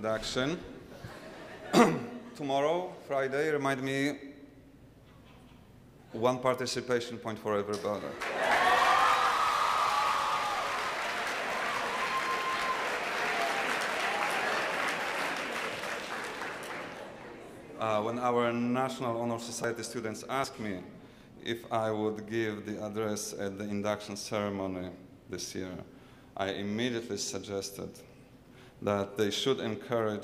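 At 9.32, 19.64 and 20.44 s the sound jumps ahead by about 70, 40 and 40 ms, likely dropped buffers (overrun) overwritten before being read.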